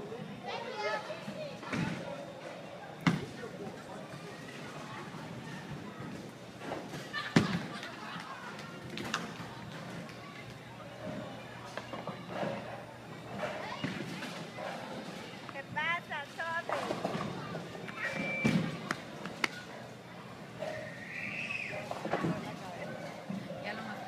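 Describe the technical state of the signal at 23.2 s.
At 23.2 s the signal is intact, with no audible fault at that moment.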